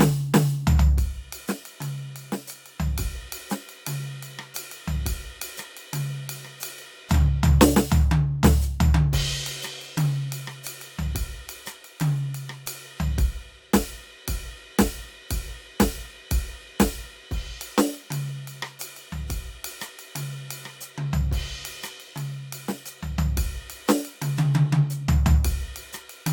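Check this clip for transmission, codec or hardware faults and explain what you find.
Nothing turned up here; the music runs along without any transmission, codec or hardware trouble to point at.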